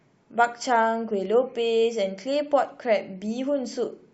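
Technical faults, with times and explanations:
No technical faults can be heard in this speech recording. Nothing in the audio stands out as a fault at any point.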